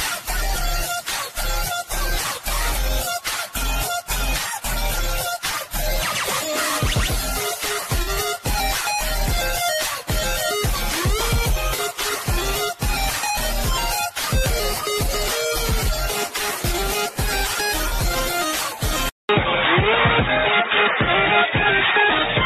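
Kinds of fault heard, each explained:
Corrupt frame concealed: Short soft-edged dips of about 60 ms at 8.02, 11.73 and 17.86 s, which fits two damaged coded frames each, covered over by the decoder without losing timing. A spectrogram shows brief faded vertical bands, and the waveform shows gently tapered notches.
Input switched to a poorer device: From 19.09 s the sound turns dull after a 200 ms silence, with nothing above 3.8 kHz, a level shift of around 5 dB and a new noise floor roughly 45 dB down, likely from a narrower-band microphone. The spectrogram shows a gap, then a flat ceiling.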